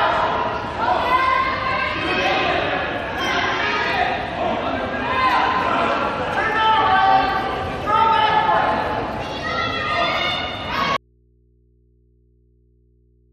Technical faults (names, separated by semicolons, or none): audio dropout to a faint residue